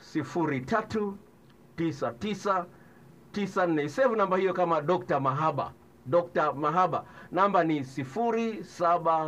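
Nothing goes wrong anywhere in this recording; there's no fault to point to at any moment.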